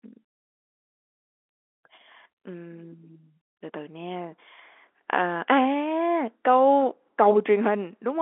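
Nothing goes wrong anywhere in this speech recording.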